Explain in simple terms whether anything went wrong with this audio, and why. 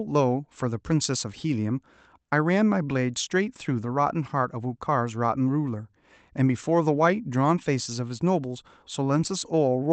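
Nothing went wrong here; the speech simply passed through a call connection.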